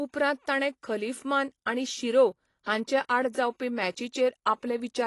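From start to finish the speech carries AAC compression damage, likely from AAC-LC at a low bitrate, around 32 kbps. Nothing is present above 11.5 kHz, and the bands below are thinned and smeared, so sibilants turn fizzy and sustained sounds warble. A simple low-pass filter would only dull the top end. Here the swirling, shifting texture inside the remaining band shows a hearing-model codec discarding spectral detail.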